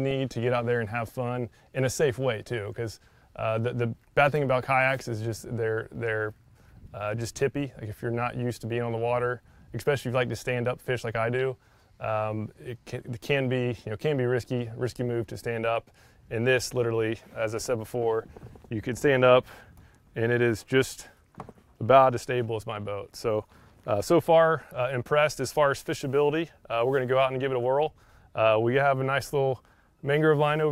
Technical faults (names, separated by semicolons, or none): none